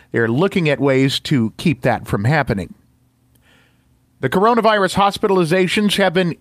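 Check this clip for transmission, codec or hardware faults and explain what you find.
I found no faults in this clip, so there is nothing to explain.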